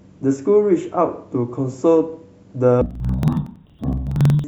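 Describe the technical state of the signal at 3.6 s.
At 3.6 s the speech sounds an octave low, doubled and choppy, fluttering at 21.5 Hz. This is interleaved audio read as planar, from 2.81 s to the end. Each 46.4 ms block, which fits a 2048-sample buffer, has its alternating left-right samples split into halves played together at half speed.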